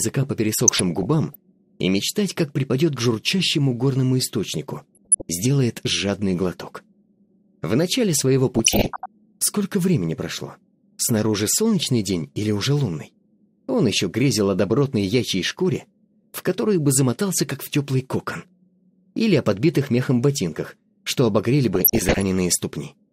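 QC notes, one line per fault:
0.59–1.35 s, 4.77–5.22 s, 8.55–9.06 s and 21.74–22.23 s, DAB burbling: short bursts of burbling sit on top of the audio, each lasting about half a second to three-quarters of a second. It's weak reception letting bit errors slip past the error correction into the MP2 stream. Corrupted samples put short blips of noise in single sub-bands, and corrupted scale factors make individual sub-bands jump in level for up to a frame. The error rate looks clearly heavier in the last two bursts.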